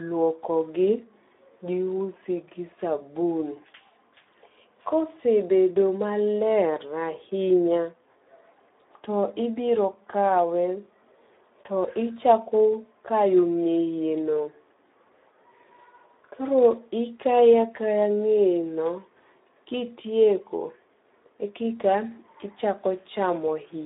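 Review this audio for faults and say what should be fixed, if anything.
The speech sounds noisy and hoarse from start to finish, squeezed into a narrow 250 Hz to 3.7 kHz band with nothing above 3.8 kHz. The cause is Speex codec compression: the CELP coder has too few bits for the excitation signal, which fits a low setting of around 11 kbps. To prevent it, encode with a wideband speech codec such as Opus at a higher bitrate.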